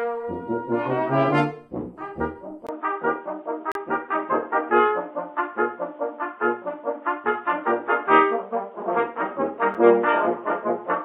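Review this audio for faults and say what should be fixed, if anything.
Input switched to a poorer device: the recording input most likely changed at 2.67 s to a narrower-band microphone or headset profile. After a 20 ms silence, the sound turns dull and boxy, with nothing above 3.8 kHz, a level shift of roughly 5 dB and a faint new background noise. Lock the capture device so it cannot change during a recording.

Gap between stream segments: the timestamps at two segment joins leave holes that playback fills with silence. These are a hard-edged 34 ms dropout from 3.72 to 3.75 s and a 6 ms one at 9.74 s. They are six seconds apart, which fits 6-second segments. No audio is lost. Make segment timestamps contiguous when joining the stream.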